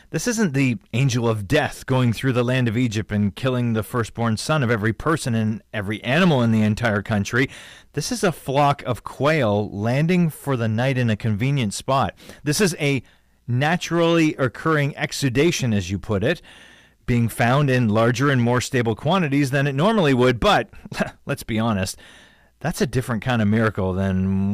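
Hard clipping runs through the whole speech recording. The signal was pushed roughly 9 dB past what one stage could pass, so its peaks are sliced flat. Only a small share of samples, around 2 percent, hit that ceiling, so the damage lands on the loudest syllables as a brittle crackle and edge. Soft saturation would round peaks and thicken the tone gradually; here the sudden flat tops spray bright, high harmonics that sound harsh.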